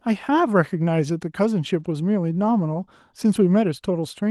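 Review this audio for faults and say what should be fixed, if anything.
Lost packets were rebuilt from error correction at 1.79 to 1.85 s and 3.51 to 3.53 s. The decoder played rough, noisier low-bitrate copies instead of gaps. Reducing network packet loss on the link would prevent this.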